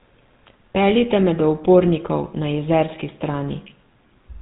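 A short speech recording run through the GSM full-rate codec from start to finish: buzzy, gravelly roughness from the pulse-driven vocal model, nothing above 3.9 kHz, consistent with 13 kbps GSM.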